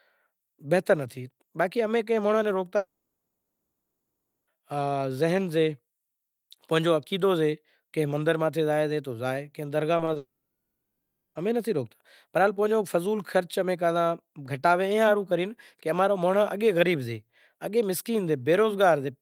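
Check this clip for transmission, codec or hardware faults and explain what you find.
Two kinds of transmission fault are audible in this speech: two long network dropouts and a short run of concealed packet loss leading into the second dropout.

Long network dropout, 2.77 to 4.49 s and 10.17 to 11.37 s, is likely caused by incoming audio stopping entirely. The receiver extends the last sound as a fading buzz, then falls silent for about 1.6 s and 1.1 s. Speech resumes with roughly 1.7 s and 1.2 s missing.

Short concealed packet loss occurs at 9.97, 10.05 and 10.13 s. Each time, about 20 ms of audio failed to reach the decoder. The receiver bridged the gap by continuing the preceding sound and blending back in, so each loss is heard as a brief smear or wobble.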